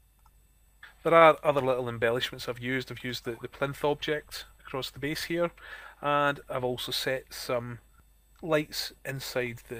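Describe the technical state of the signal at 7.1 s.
At 7.1 s a jitter buffer speed-up is under way, running from 7.10 to 7.96 s. The receiver's jitter buffer was holding more audio than its target, so it shortened the playout by cutting out short pitch-period-length pieces one after another, about 40 ms in total. The audio therefore plays at 104% speed with its pitch unchanged, a small acceleration just under the point where it would start to sound hurried.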